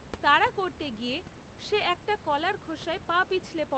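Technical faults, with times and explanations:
No technical faults are present: the room's background noise sits about 16 to 22 dB below the speech, and the call codec's band limit near 8 kHz gives the audio a softened top end, which fits a modest call bitrate.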